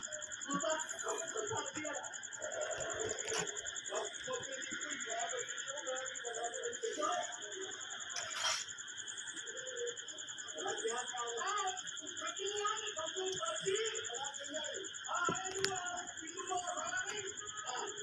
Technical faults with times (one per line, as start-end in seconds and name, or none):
none